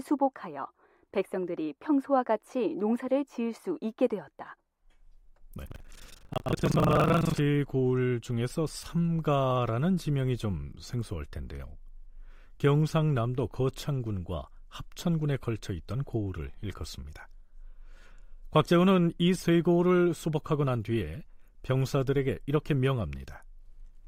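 The program filling the playback ring buffer and the hardware reading it have drifted out of step, so they cross inside every period: buffer tearing, from 5.63 to 7.41 s of this speech recording. In each buffer roughly half the audio is stale, left from about 150 ms earlier, and hard joins on either side of it produce a rattling, robotic buzz at 23.4 Hz, a rate that fits a 2048-sample buffer.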